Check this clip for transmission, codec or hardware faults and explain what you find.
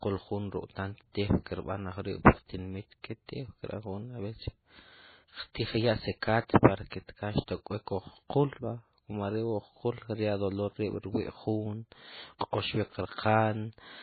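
One codec fault runs through the whole clip. Throughout, likely MP3 compression starved of bits removes everything above 4.5 kHz and flickers weak frequency lines on and off, leaving speech dull and watery.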